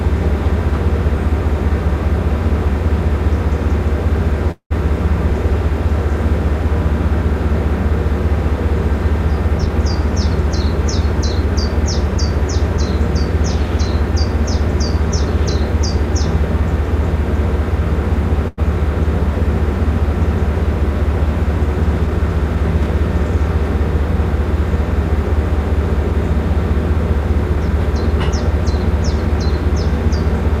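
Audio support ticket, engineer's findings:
Call audio freeze, 4.51 to 4.72 s. Packets likely held in transit, jitter buffer drained. Receiver extended last sound as fading fill for about 190 ms, roughly 100 ms of it silent. Playback then resumed where it stopped, nothing lost, gap inserted.

Jitter buffer speed-up, 9.58 to 12.78 s and 22.07 to 29.28 s. Buffer overfull, receiver trimming pitch-period-sized slices repeatedly to cut delay. Audio runs about 3% fast in the first stretch and 2% in the second, pitch unchanged. Roughly a tenth of a second removed, then around 150 ms.

Short stall from a late packet, 18.48 to 18.60 s. Packet missed its slot, buffer briefly empty. Last sound stretched about 98 ms until arrival, then continued from the same point. Nothing missing, but a held sound with a slight buzz or dip.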